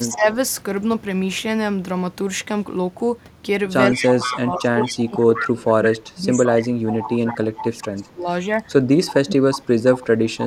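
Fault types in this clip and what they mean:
Speech suppressed in double talk: the speech level dips by about 10 dB at 0.07–0.26 s, then repeatedly by up to about 25 dB from 3.91 to 10.19 s. This is likely an echo canceller muting this talker while the far side spoke. A waveform shows a squashed envelope, and a spectrogram shows fading, gappy energy.
Echo leak: a copy of the speech returns 168 ms late, at about 10 to 15 dB below it. It appears at 3.93–4.39, 4.82–5.45, 5.85, 6.46 and 6.90–7.37 s, likely where a loudspeaker echo slipped past cancellation. A spectrogram shows faint, time-shifted duplicate patterns trailing the originals.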